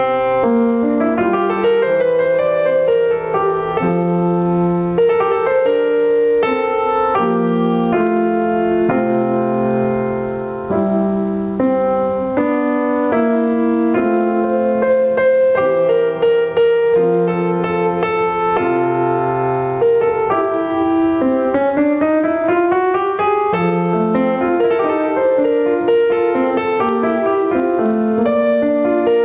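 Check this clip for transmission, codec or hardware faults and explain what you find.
One fault runs through the whole clip: gain pumping. The input gain is likely set far too high, so a fast limiter clamps down on every loud passage of the music. The level swings by around 15 dB, flattening the dynamics into a squashed sound. Nothing above 4 kHz comes through, which fits the narrowband call codec it passed through.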